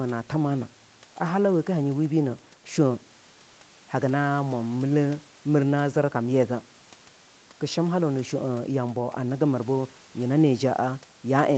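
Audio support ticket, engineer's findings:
Nothing wrong turned up in this speech sample, just the normal call-path character, with the microphone processing and the Opus leg keeping the top end at 8 kHz as they're meant to.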